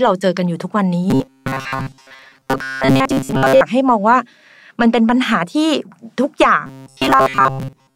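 Speech with robotic sound from repeated short buffers, from 1.10 to 3.62 s and again from 6.66 to 7.95 s. Both spans take on a rigid, metallic buzz at 133 Hz, which fits a segment of about 7.5 ms being replayed over and over, likely because fresh audio arrives too slowly. Roughly 70% of the material is repetition. Unlike a codec's watery warble, the buzz holds one fixed pitch while the voice underneath still roughly tracks.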